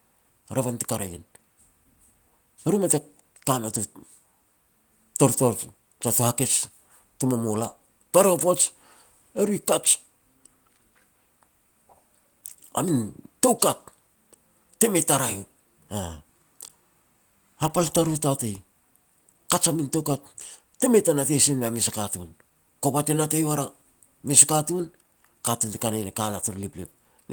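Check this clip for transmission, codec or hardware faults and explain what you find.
No transmission, codec or hardware faults turn up anywhere in this speech recording. The Opus voice compression running in hybrid mode keeps the full band, with content reaching up to about 20.2 kHz, and leaves only light traces of coding on the speech.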